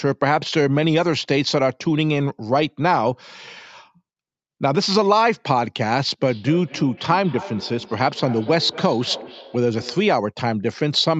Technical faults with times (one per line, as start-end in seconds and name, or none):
6.26-10.28 feedback echo between two devices